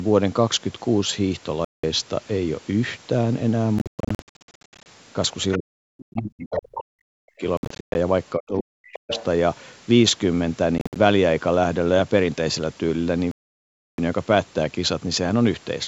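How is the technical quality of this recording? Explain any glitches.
The recording has repeated gaps, stray far-end voice and ducked speech. The call processing's band limit, with nothing above 8 kHz, is expected.

Bluetooth dropouts occur at 1.65–1.84 s, 3.79–4.86 s, 7.57–7.95 s, 10.78–10.96 s and 13.31–13.98 s. These are hard silences, likely from lost wireless packets. Speech resumes as if it had kept playing. The 3.79 s and 7.57 s ones are broken into runs up to 116 ms.

The other side's voice leaks through at 5.52–5.56 s, 6.53–6.81 s and 8.92–9.24 s, about 10 to 15 dB below the talker. This is likely residual loudspeaker echo the canceller missed. It adds a second voice rather than removing anything.

Speech is suppressed in double talk at 5.58–7.43 s and 8.36–9.12 s. The talker dips by up to about 40 dB, likely because the canceller ducked both voices. Unlike a dropout, the level sinks in patches while the other side speaks.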